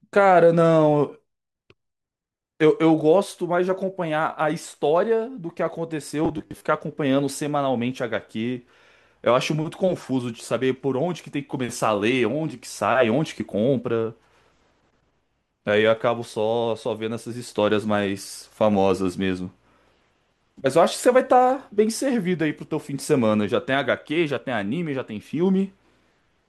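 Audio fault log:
6.25–6.64 s, robotic sound from repeated short buffers: for about 0.39 s the speech turns into a rigid, metallic buzz pitched at 100 Hz that still loosely tracks the syllables. The likely cause is audio arriving too slowly, with the playback side filling the gaps by looping the most recent fragment. A 100 Hz buzz fits a fragment about 10 ms long, and somewhere around two fifths of this stretch sounds repeated rather than fresh.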